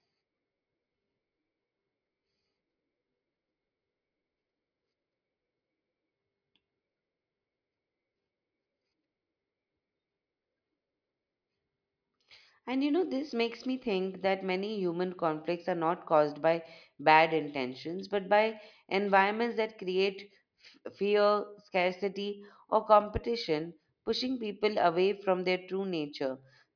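No technical faults are audible anywhere in the recording.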